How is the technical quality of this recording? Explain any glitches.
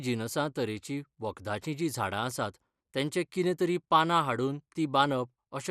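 The recording carries plainly audible compression damage throughout the speech. Nothing reaches above 14.4 kHz, and the remaining bands sound dull, gurgling and granular. The likely cause is MP2 compression at a low bitrate, consistent with about 80 kbps: too few bits force upper sub-bands off and leave the rest coarsely quantised.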